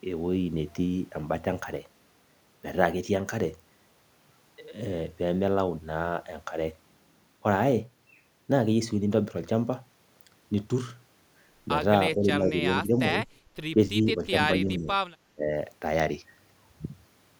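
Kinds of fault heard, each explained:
Speech suppressed in double talk: The speech dips in five short bursts between about 12.2 and 15.5 seconds. Drops run from slight to about 20 dB, each under half a second. An echo canceller likely turned the talker down while the far side spoke.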